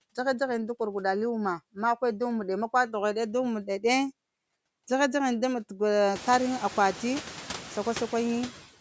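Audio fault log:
Throughout: noise suppressor artifacts. The background noise ducks in the pauses between words and swells back underneath them, so the noise floor pumps with the speech. A frame-by-frame suppressor is pulling down every band it judges to be steady noise, by about 13 dB, and releasing those bands whenever speech energy covers them. After roughly 6 s the room noise climbs by about 23 dB.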